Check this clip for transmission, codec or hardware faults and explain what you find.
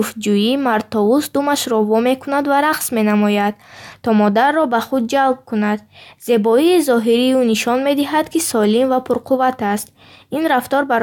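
Nothing here points to a transmission, codec or hardware problem; the speech comes through without any dropouts, glitches or other faults to report.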